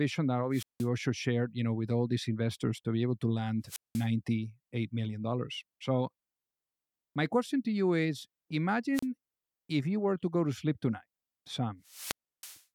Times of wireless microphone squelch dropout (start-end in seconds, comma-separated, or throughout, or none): 0.51-0.88, 3.64-4.08, 8.93-9.06, 11.84-12.63